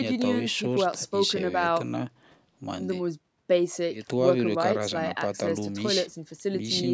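No faults in this speech.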